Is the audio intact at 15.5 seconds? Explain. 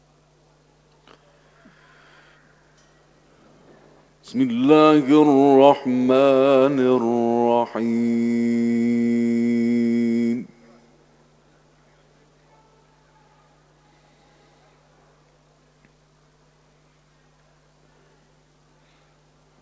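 Yes, the audio at 15.5 seconds is intact, with no dropout, glitch or other fault at that moment.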